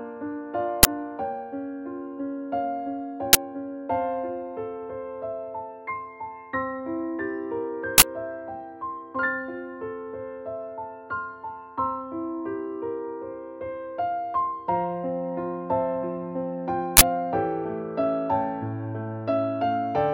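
Uninitialised buffer bursts at 0.83–0.85, 3.33–3.35, 7.98–8.02 and 16.97–17.01 s: blocks played before being filled, leftover memory heard as loud digital noise.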